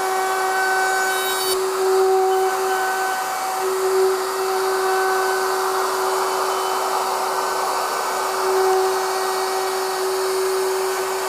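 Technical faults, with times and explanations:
No technical faults are audible anywhere in this audio.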